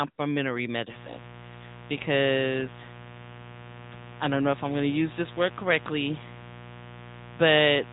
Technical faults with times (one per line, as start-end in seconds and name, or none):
0.00-7.93 AMR narrowband mobile codec
0.90-7.93 mains buzz